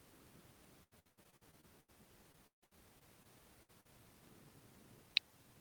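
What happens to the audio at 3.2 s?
At 3.2 s you're near the tail of a run of repeated packet loss (robotic sound) that lasts from about 2.32 to 3.27 s. Packets went missing six times in that stretch, the longest hole around 153 ms, and each gap got papered over by stretching out the last bit of sound. With roughly 30% of the stretch patched like that, the speech comes out choppy, with chunks dropped.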